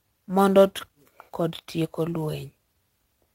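A speech recording carries three technical faults. Sample clock jitter runs through the whole clip. The converter's clock wanders by around 7 microseconds, so each sample is taken a little off its proper instant. The error is largest where the waveform changes fastest. It sits at roughly 30 dB below the speech. It shows as a hiss or grit that swells on loud and bright sounds and drops away in the pauses. At 0.79 to 0.81 s there is a skip ahead. Playback jumps forward with no gap and nothing filled in. Something like 0.7 s of speech is simply gone. Later audio was already waiting, so the missing stretch was dropped, either in transit or by an overflowing jitter buffer. The two sides are butted almost directly together. From 0.89 to 2.82 s comes a jitter buffer speed-up. The buffer was holding more audio than its target. To shed that delay, the receiver repeatedly cut out short slices a pitch period or so long. 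The speech runs at about 119 percent speed while its pitch stays the same. It sounds hurried. Roughly 0.4 s of audio is trimmed away across that span.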